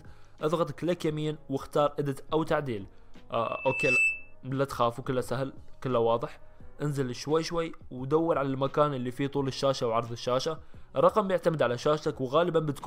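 The audio carries a loudspeaker feedback squeal from 3.42 s to 4.35 s: a single 2.6 kHz tone swells over about half a second to roughly 5 dB above the signal, because the microphone was picking up its own loudspeaker with loop gain above one at that frequency.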